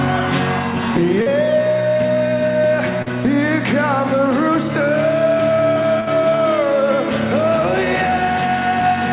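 A call recording over a narrowband path, with nothing above 4 kHz, consistent with G.711 A-law at 64 kbps, carries two kinds of loss fault. Short concealed packet loss occurs at 1.22 to 1.28 s and again at 3.02 to 3.08 s. In each case about 40 ms of audio never arrived, and the receiver bridged the hole by extending the preceding sound before blending back. The result is a brief smear or wobble rather than a silent dropout. A burst of packet loss follows at 6.00 to 6.09 s, where about 60 ms went missing and roughly 65 ms was synthesised. That is long enough for the continued sound to be faded down as the gap runs on, so it is heard as a held buzz or dying hiss. The audio then resumes further along, with a section skipped. The longer fade and the jump forward set it apart from the two quick smears earlier.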